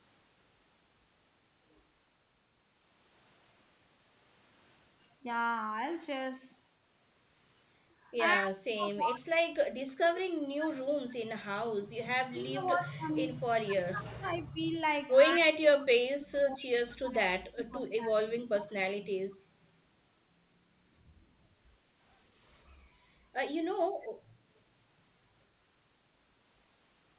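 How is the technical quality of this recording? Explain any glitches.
The recording has two kinds of glitch, both tied to echo cancellation on a narrowband call line. Nothing comes through above 4 kHz, which fits a G.711 A-law connection at 64 kbps.

The speech is suppressed in double talk five times: 8.35–9.31, 9.72–11.98, 12.28–14.76, 15.39–16.7 and 16.99–18.71 s. The voice sinks by roughly 25 to 35 dB. That's likely the canceller mistaking the near talker for loudspeaker echo while both sides spoke at once.

Around 22.72–23.06 s the background is gated by the echo canceller. The room tone dips by about 6 dB for roughly a third of a second and then comes back. The canceller clamped the mic while the far end was playing and released it a moment later.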